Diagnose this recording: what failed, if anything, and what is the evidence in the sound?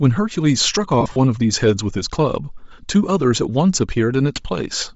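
Bluetooth LC3 compression runs through the whole speech clip, a codec-stage fault. The upper spectrum is plainly degraded: high frequencies have been stripped and replaced with shaped noise, giving consonants and vowels a breathy, grainy edge. That texture is the likely signature of LC3, the LE Audio transform codec, running at a low bitrate. The amount of damage points to roughly 32 kbps, too little to code the top of the band properly.

Lost LE Audio frames appear at 1.01 to 1.17 s and again at 4.36 s, a wireless-link (network-stage) fault. In the first stretch, about 90 ms of audio is missing, scattered across 150 ms, with the longest gap around 40 ms. That fits roughly a dozen dropped 7.5 ms frames. The decoder concealed each gap by repeating the last spectrum with randomised phase, so the speech smears into noise there. The isolated dropout at 4.36 s is a brief single-frame blur.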